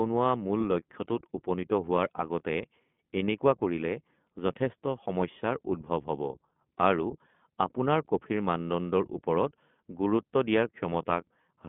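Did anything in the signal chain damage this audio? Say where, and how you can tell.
Yes. At the codec stage, iLBC coding runs throughout. The audio is confined to roughly 150 Hz to 3.4 kHz and sounds plainly rough and synthetic, which fits the 15.2 kbps, 20 ms frame mode.

At the network stage, lost iLBC frames cause a brief buzzy, held-vowel smear from 8.08 to 8.10 s. That matches one concealed 20 ms frame, with a clean recovery right after.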